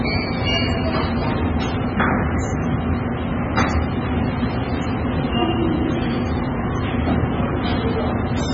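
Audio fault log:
Throughout, MP3 compression: nothing above 7.5 kHz, heavy watery swirl and smeared attacks, likely from a very low bitrate around 16 kbps starving the encoder.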